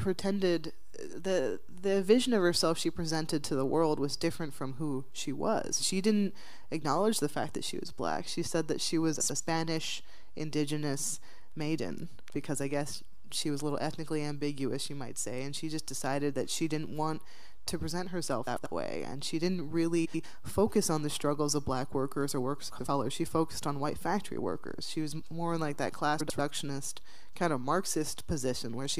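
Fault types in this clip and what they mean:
Frames out of order: two adjacent blocks of about 93 ms each play in swapped order, so a stretch of roughly 0.2 s is heard second half first. This happens at 9.20, 18.47, 20.05, 22.71 and 26.20 s, each time as a brief garbled flutter. Unlike a dropout or skip, nothing goes missing and the timing stays intact. Unlike a stutter, nothing repeats; the sound is only reordered.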